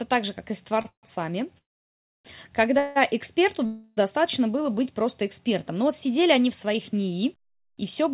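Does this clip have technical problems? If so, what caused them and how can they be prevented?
Yes. At 0.82 to 0.87 s, right after "же как и с", a sound is held about 27 ms too long, and then the speech carries on with nothing lost. This is a short stall from a late packet. One packet arrived after it was due, the jitter buffer emptied, and the receiver stretched the last bit of sound until the packet arrived. A slightly deeper jitter buffer would absorb a delay this small.

Four call audio freezes follow, each putting a gap into the speech without losing any of it. The first runs from 0.89 to 1.05 s, still just after "же как и с". It gives about 142 ms of fill, mostly silence. The longest runs from 1.58 to 2.27 s and fills about 666 ms, nearly all of it silent. From 2.79 to 2.98 s the last sound is carried on for about 170 ms with no silence. From 3.66 to 3.99 s the fill lasts about 313 ms, with about 10 ms of silence. 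The likely cause is a run of packets held up in the network, so the buffer ran dry and the receiver covered the wait until they arrived. Prioritising the audio traffic on the network, for example with QoS, would prevent these.

From 4.59 to 4.85 s, just before "просто экспертом", the speech slows to about 88% speed at unchanged pitch. The sounds are drawn out, and about 38 ms in total is added. This is a jitter buffer slow-down. Running low or having just raised its target delay, the buffer repeated single pitch periods to rebuild its reserve. Steadier packet arrival would keep the buffer from needing to refill this way.

The audio has no content above 4 kHz, which fits the narrowband call codec it passed through.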